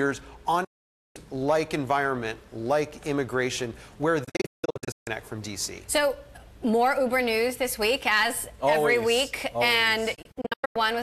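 Digital broadcast dropouts occur at 0.64–1.16 s as one solid gap, then at 4.24–5.07 s and 10.15–10.83 s as clusters of short holes. Each is a receiver mute on lost or corrupt frames, with an 8 ms fade, and the sound sent meanwhile is gone.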